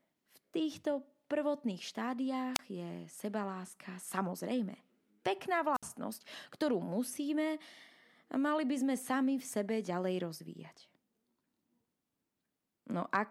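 At 2.54 to 2.59 s, just before "je sebaláska", and again at 5.74 to 5.83 s, the speech breaks up in a wireless microphone squelch dropout. The FM radio link weakens, hiss swells briefly, and the receiver's squelch then cuts the output to near silence for about 29 ms and 62 ms respectively before the signal recovers. The rising static ahead of each gap separates this from a digital packet dropout, which falls silent abruptly with no noise beforehand.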